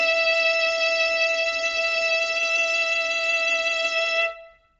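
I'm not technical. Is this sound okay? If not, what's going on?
No. The music was likely squeezed through heavy Bluetooth LC3 compression, which throws away detail: from start to end, nothing sounds above 7.8 kHz, leaving it dull, grainy and hissy.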